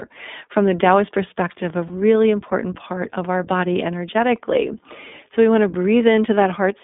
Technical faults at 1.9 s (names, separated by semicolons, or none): iLBC codec; lost iLBC frames